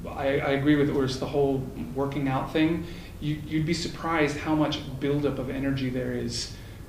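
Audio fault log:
No faults turn up anywhere in this clip. The audio carries on without any interruption or damage that a listener would notice.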